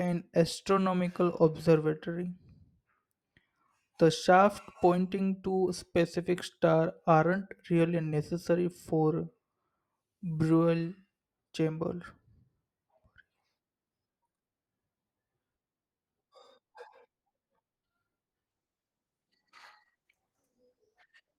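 At 18.48 s the speech switches abruptly to an adaptive stream at a lower bitrate and stays there until the end at 21.39 s. Codec artefacts rise, pointing to the player dropping from about 64 kbit/s Opus to a 16 kbit/s rendition when the connection slowed. There is no gap or stutter at the switch, which distinguishes it from a dropout or rebuffering stall.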